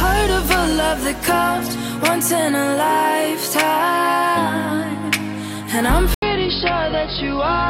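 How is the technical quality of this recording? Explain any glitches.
The recording has one glitch, near the end. At 6.14 s, after a gap of 80 ms, the sound turns dull and boxy, with nothing above 5.2 kHz, and stays that way to the end. It drops a few dB in level and gains a new noise floor roughly 30 dB down. This is likely an input switched to a poorer device. A plain filter change would not bring a new noise floor and level shift.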